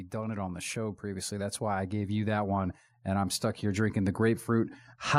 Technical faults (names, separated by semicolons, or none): automatic gain rising